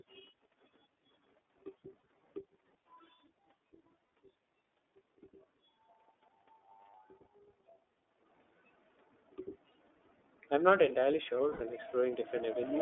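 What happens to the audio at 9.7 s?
At 9.72 s a single frame of lost iLBC frames drops out, with the gap running to about 9.75 s, roughly 30 ms of audio, which fits one 30 ms iLBC frame. The decoder covers the hole by repeating the last pitch cycle blended with noise, so the speech briefly turns into a short, held, slightly buzzy vowel-like sound. Because each iLBC frame is decoded independently, the voice recovers cleanly on the next frame.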